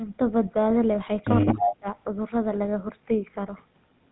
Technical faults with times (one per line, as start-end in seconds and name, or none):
0.00-4.12 GSM full-rate codec
1.46-1.76 echo leak
1.55-1.87 speech suppressed in double talk